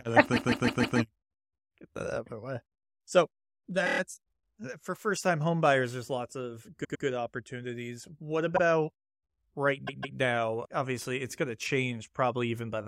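Repeated frames make the speech stutter five times. At 0.35 s, after "kind of", a 157 ms block plays four extra times, to 0.98 s. At 3.85 s, a 26 ms fragment repeats five times. At 6.83 s, after "homebuyers there's lots of", a 105 ms block plays twice more. At 8.56 s, a 52 ms block repeats once. At 9.86 s, a 157 ms block plays twice more. The same compressed stretch is decoded again each time, which lengthens the audio.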